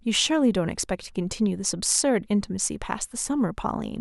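A speech recording with no technical fault to be heard anywhere in it. Nothing in the signal is damaged at any point, so there are no times or causes to report.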